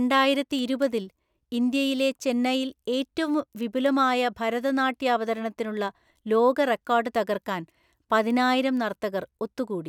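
From 0.12 s to 9.71 s the speech carries word clock ticks. They arrive at a steady pace of about five per second, around forty in all. Each is short and sharp, and some are louder than others. The receiving device runs on its own clock rather than locking to the sender's. The two clocks drift by roughly a hundred parts per million. At each slip a single sample is dropped or repeated, and that produces a tick.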